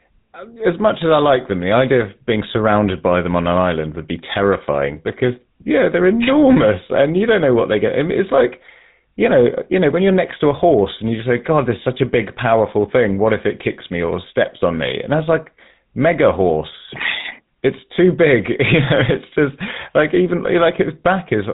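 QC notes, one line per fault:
Throughout, GSM full-rate codec: speech coded by a vocal-tract model with sparse pulse excitation, likely at 13 kbps, leaves buzzy, gravelly roughness and nothing above 3.8 kHz.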